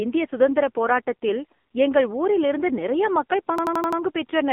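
From start to finish the voice sounds thin, buzzy and synthetic, boxed into a band of roughly 250 Hz to 3.5 kHz with nothing above 3.5 kHz. That is the AMR narrowband mobile codec at work. AMR-NB rebuilds speech from a vocal-tract model excited by sparse pulses, and at a low bitrate, fitting about 6.7 kbps, the damage is heavy. Sibilance loses its top end and the speech takes on an artificial, reedy edge.

From 3.58 to 4.01 s a short fragment of sound repeats five times in a rapid stutter at about 11.7 Hz, a mechanical rattle rather than continuous speech. This is a system hang loop. The computer stalled while the audio hardware kept replaying the same ring buffer, each pass lasting 85.33 ms, which fits a 4096-sample buffer. Little or no audio seems to have been dropped. The same slice simply recycled until the system recovered.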